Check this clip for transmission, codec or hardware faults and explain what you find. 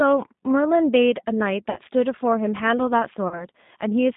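Two faults are audible: G.729 codec coding across the whole speech clip, and VoIP packet loss concealed by the speech codec at two points.

Throughout, the speech sounds narrow, slightly rough and synthetic, with nothing below about 150 Hz or above 3.7 kHz. This is plainly audible G.729 codec damage at 8 kbit/s. The decoder does not carry the waveform itself. It rebuilds each 10 ms frame from a vocal tract filter, a pitch predictor and a few pulses, so fine detail becomes a coarse approximation.

At 1.70 to 1.80 s and again at 3.28 to 3.45 s, the speech is stretched into a buzzy tone or coloured noise that fades, and then comes back weak or distorted before it recovers. This is VoIP packet loss concealed by the speech codec. The first gap is about 60 ms, which fits two lost packets, and the second is about 30 ms, which fits one. The decoder filled each gap by repeating its last pitch and filter while lowering the gain. 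Because every frame builds on the previous one, the distortion continues briefly after the packets return.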